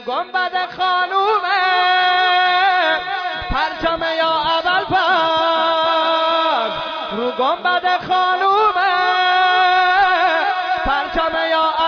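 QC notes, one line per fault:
No faults found on the QC pass; nothing logged against this clip.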